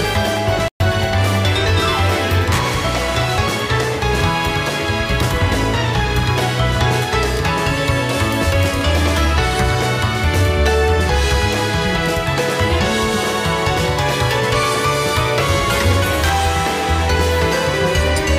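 A playback stall runs from 0.68 to 0.80 s: the sound cuts out abruptly in mid-flow and the output sits in dead silence for 120 ms before the audio comes back. A gap of that length is long enough to register as a clear hiccup rather than a click. The likely cause is the player running short of buffered data, or its output thread being held up, so nothing reached the device until it caught up.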